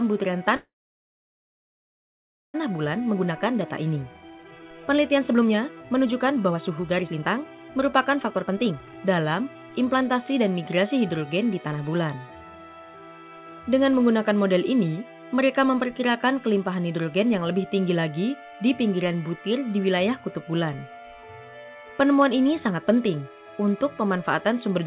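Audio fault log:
0.56 to 2.56 s, call audio freeze: The sound stops and about 2.0 s of filler is inserted. A brief fading continuation of the last sound is followed by about 1.85 s of near silence. Nothing is lost. The audio resumes exactly where it broke off, just later. The likely cause is delayed packets draining the jitter buffer, so the receiver had nothing to play and padded the wait until data arrived.
2.78 to 10.39 s, jitter buffer speed-up: Right after the freeze the audio runs at about 126% of normal speed for roughly 7.6 s. It sounds hurried, but the pitch stays unchanged. The receiver is shedding the extra delay the freeze built up. It repeatedly cuts tiny pieces, one or a few pitch periods long, until roughly 2 s of the backlog is gone. Throughout, the call codec path holds everything below 4 kHz, which fits G.711 A-law at 64 kbps.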